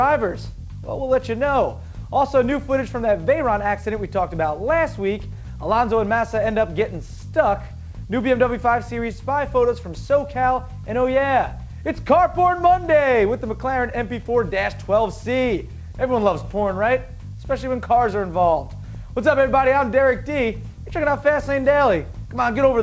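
No technical faults can be heard anywhere in this audio. It has passed through a call path whose wideband codec, which fits G.722 at 64 kbps, leaves nothing above 8 kHz.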